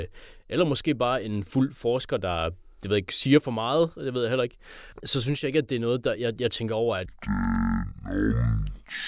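From 7.06 s to the end, after "jeg jeg tænker over", a wrong sample rate fault plays the speech at half the speed it was captured at, which fits 16 kHz audio being read out at 8 kHz. Everything slows to 0.5x and drops a full octave (12 semitones), sounding low and dragging.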